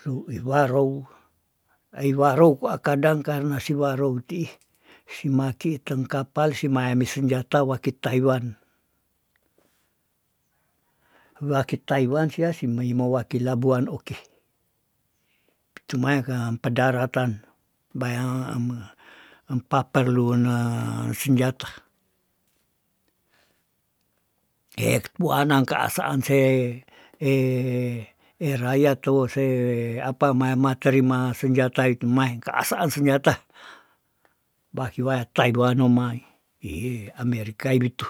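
Speech recording, with no technical faults audible anywhere in it.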